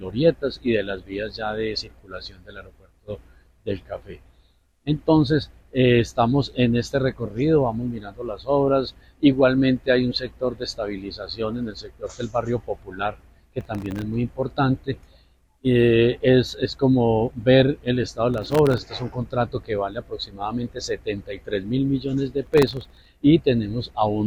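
Processor overload crackle occurs from 13.61 to 14.02 s, 18.34 to 18.79 s and 22.43 to 23.08 s. Dozens of missed buffer deadlines, pointing to buffers under a millisecond, each leave a hard-edged silent gap, heard as gritty tearing that stops when the load clears.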